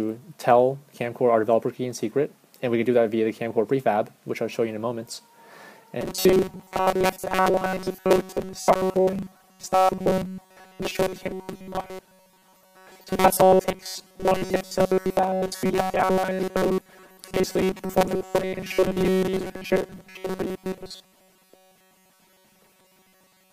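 From 6.01 s, robotic sound from repeated short buffers: a steady 188 Hz buzz, not wandering warble, likely from a roughly 5 ms chunk looping.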